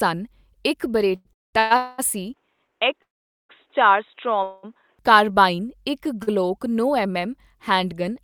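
At 1.15 s the speech hangs for about 97 ms in a short stall from a late packet. The jitter buffer ran dry, so the last sound was stretched until the packet came in, and then the audio resumed from the same point with nothing lost.

A run of call audio freezes follows: 1.33–1.55 s (200 ms of silence), 1.59–1.72 s (113 ms), and 1.76–2.00 s (219 ms), the later two each a held, fading continuation of the last sound. Packets were likely delayed in transit and starved the buffer, inserting gaps without dropping content.

From 2.34 to 4.99 s the input switched to a poorer device, likely a headset call profile or second microphone. The band is cut with nothing above 3.8 kHz, giving a dull, boxy tone over a new noise floor roughly 45 dB down, with no level jump or silence at the change. Clear audio returns just before "ਕਾਰਬਾਈਨ ਇੱਕ".

Within that stretch there are two more freezes: 3.02–3.51 s, 469 ms, mostly silent, and 4.43–4.65 s, 199 ms, ending just before "ਕਾਰਬਾਈਨ ਇੱਕ".

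At 6.23 s, between "ਕਾਰਬਾਈਨ ਇੱਕ" and "ਨੌ ਐੱਮ ਐੱਮ ਹੈਂਡਗਨ", a second short stall holds the sound for 40 ms.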